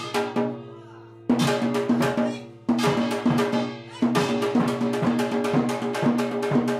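No technical faults can be heard anywhere in this sound recording; the signal stays continuous and stable throughout.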